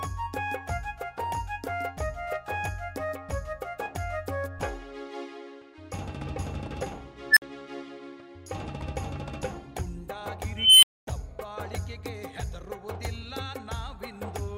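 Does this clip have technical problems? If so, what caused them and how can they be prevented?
Yes. There are two unstable-filter events. At 7.31 s a tone of roughly 2 kHz swells over 59 ms to clipping. It then drops to silence for 53 ms, ending at 7.42 s. At 10.57 s a higher tone, near 3 kHz, builds for 256 ms. It is followed by 245 ms of silence, ending at 11.07 s. A recursive filter with bad coefficients ran away until its values overflowed and it reset. To prevent it, check filter coefficients for stability before applying them.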